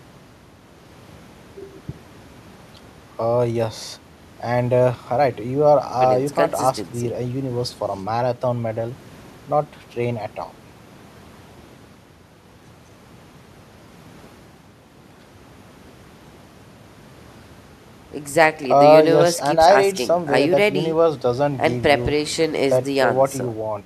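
No technical faults are audible anywhere in the recording.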